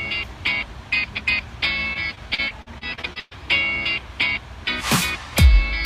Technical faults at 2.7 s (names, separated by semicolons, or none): repeated packet loss (robotic sound)